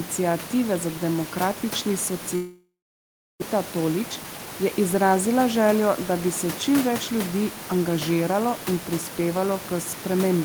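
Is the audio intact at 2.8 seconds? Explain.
No. A long network dropout spans 2.35 to 3.44 s, likely from about a second of audio never arriving. The receiver stretches the last sound into a fading buzz, then leaves 0.67 s of near-silence before speech resumes without the lost part.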